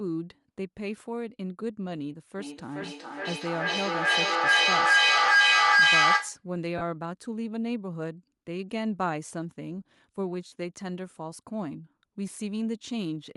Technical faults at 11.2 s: Bluetooth LC3 compression

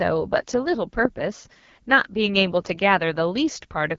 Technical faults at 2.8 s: AMR wideband (HD Voice) codec

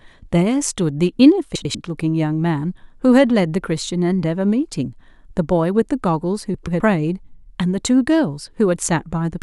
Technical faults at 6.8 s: frames out of order

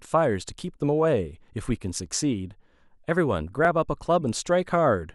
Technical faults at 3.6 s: repeated buffer

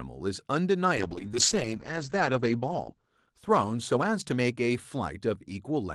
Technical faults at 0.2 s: none

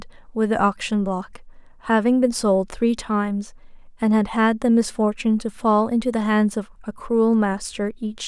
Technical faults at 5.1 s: none

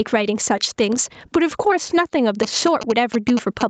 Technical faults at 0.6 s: gain pumping

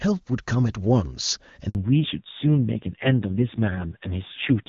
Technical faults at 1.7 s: handover gap; fallback to narrowband

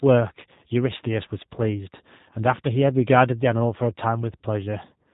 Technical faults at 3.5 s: G.729 codec

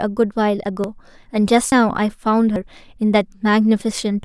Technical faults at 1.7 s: dropped buffer (overrun)

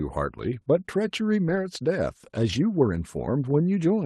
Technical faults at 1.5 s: lost packet rebuilt from error correction

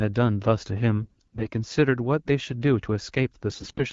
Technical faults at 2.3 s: none

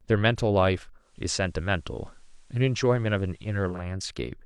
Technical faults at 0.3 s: none

